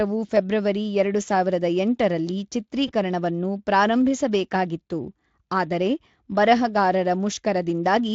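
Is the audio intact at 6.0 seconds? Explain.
Yes, the speech at 6.0 seconds is intact, with no fault at that moment.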